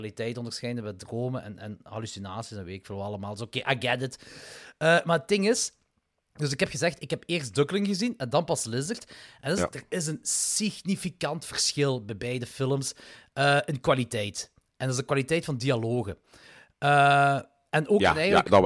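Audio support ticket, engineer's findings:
Speech signal checked end to end with no audible defects found in level, continuity or timing.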